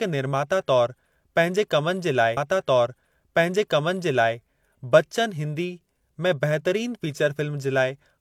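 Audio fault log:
2.33–4.32 s, stream segment repeated: the same 2.0 s of speech plays twice, with a small blip at the jump back. A whole segment replays, unlike a brief stutter.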